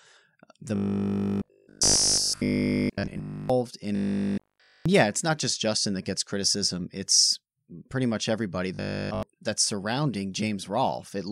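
Speech, with robotic sound from repeated short buffers at 0.76–3.50, 3.96–4.86 and 8.75–9.23 s: a rigid 50 Hz metallic buzz, with essentially nothing new getting through. That's likely one 20 ms chunk looping while fresh audio arrives too late.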